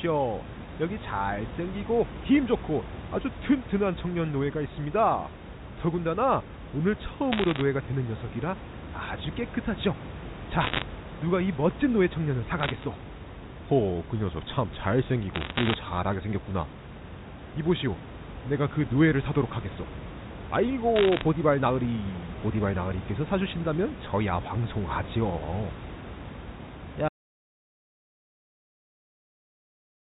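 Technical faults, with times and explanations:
7.32–7.61 s, 10.60–10.84 s, 12.60–12.84 s, 15.34–15.74 s and 20.96–21.22 s: bit errors on a digital phone line. Around one percent of bits flip in these bursts, producing sharp ticks and crackle where high or sign bits of samples change.
27.09 s to the end: audio dropout to silence. The sound cuts off mid-flow into silence with no room tone, likely from lost input through a disconnected device, failed link or stray mute.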